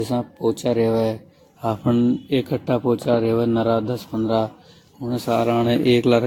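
From the start and throughout, the speech sounds swirly, smeared and hollow, with softened attacks and nothing above 18.2 kHz. This is likely generation loss from roughly seven successive lossy encodes at similar bitrates, each requantising on a shifted frame grid and compounding noise and spectral holes.

At 0.49 s there is an underrun with held sample. The output buffer ran dry for about 0.67 ms, and the converter held its last value, briefly flattening the waveform. Under a millisecond of audio was lost.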